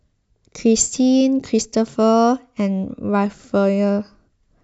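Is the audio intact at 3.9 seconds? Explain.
Yes, at 3.9 seconds the speech plays through intact, with no dropout, click or other fault audible at that moment.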